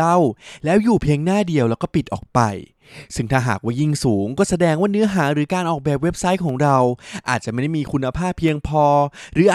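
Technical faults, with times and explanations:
0.50–8.48 s, periodic USB or driver dropouts: about five brief ticks, every 2.0 s, where the driver stalls and well under a millisecond of speech drops to silence.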